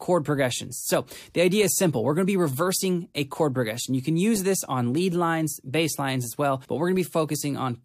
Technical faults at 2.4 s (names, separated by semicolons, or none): none